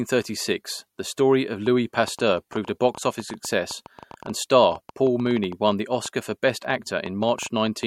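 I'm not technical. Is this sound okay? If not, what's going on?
No. From 1.66 s to 7.84 s, a train of clicks ticks over the speech about eight or nine times a second, unevenly, likely from electrical interference.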